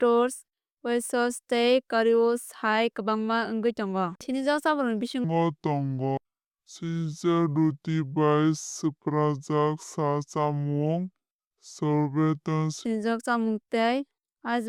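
A section at the wrong speed runs from 5.24 s to 12.85 s of this speech clip, likely from a playback or editing stage running that stretch on a mismatched clock at two-thirds of the original rate. Because speed and pitch are tied together, the passage drags slowly and drops by roughly seven semitones, giving it a deep, sluggish quality, beginning just ahead of "chámung tei eisbein sukni".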